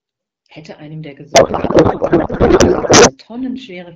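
From 1.33 to 3.16 s there is a codec payload misread: the far end packs its AMR-WB frames octet-aligned, but the receiver unpacks them as bandwidth-efficient, so every field lands a few bits off. The decoder still accepts each frame and renders nonsense parameters, so the speech gives way to garbled noise and warble that barely tracks it. The clean wideband sound before and after, consistent with AMR-WB at 12.65 kbit/s, returns once the framing lines up again.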